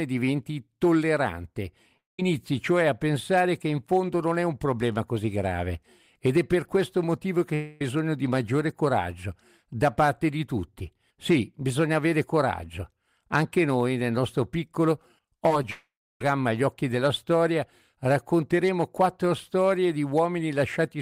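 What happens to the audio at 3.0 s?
Nothing goes wrong at 3.0 s; the speech carries on intact through that moment, with no dropout, click or distortion.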